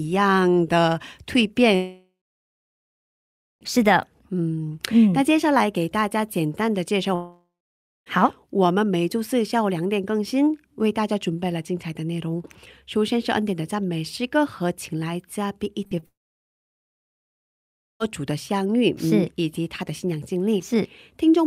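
At 1.75 s a likely long network dropout stops audio arriving for about 1.9 s, up to 3.63 s. The receiver stretches the last sound into a fading buzz or hiss, then roughly 1.5 s of silence follows before the speech resumes with that stretch missing. The same thing happens from 7.15 to 8.08 s, with about 0.9 s lost. The fill fades into around 0.6 s of silence, and the speech picks up further on.

Between 15.84 and 16.04 s there are three short concealed packet losses. About 20 ms, then 40 ms, then 20 ms never reach the decoder in time. Each gap is patched by extending the preceding sound and blending back, so the speech smears and wobbles briefly across that fifth of a second. Right after, at 16.06 s, another likely long network dropout cuts about 1.9 s until 18.02 s. Here the patch dies away almost immediately, leaving near-total silence before the audio returns without the lost part.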